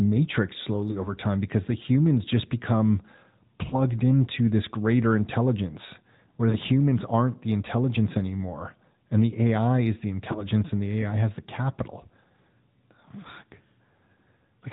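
The AMR narrowband mobile codec shapes the whole clip. Nothing above 4 kHz gets through, so the speech sounds thin and boxed in. The buzzy, synthetic edge suggests a mid-rate mode near 10.2 kbps. The codec damage is plainly audible.

Lost AMR speech frames break in four times. Each sounds like a single missing 20 ms frame. The decoder fills the gap by repeating the last sound at falling level. This gives a short dip or warble at 0.92 to 1.09 s, just before "time because the humans". Another comes at 3.70 to 3.75 s, before "into this greater intelligence". A third falls at 6.50 to 6.58 s. The last is at 10.32 to 10.46 s, between "is the" and "and the".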